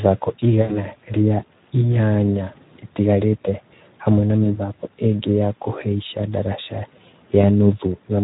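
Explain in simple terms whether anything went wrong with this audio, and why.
Two things went wrong. The whole recording passed through the Speex codec, an older speech codec used for internet calls and game chat. It was squeezed hard, so the speech sounds noisy and hoarse from start to finish.

There is also VoIP packet loss concealed by the speech codec. Small pieces of the audio never arrived. The decoder guessed the missing sound by stretching what came just before, which gives a short buzz or hiss that fades out. Speech stays weak for a moment afterwards. This happens from 0.61 to 0.86 s, just before "rĩa inyanya ĩtigarĩte hamwe". It happens again from 4.43 to 4.60 s, between "inyanya ĩtigarĩte hamwe na" and "ĩngĩ ya kuhaica ndarasha". The last time is from 7.41 to 7.49 s.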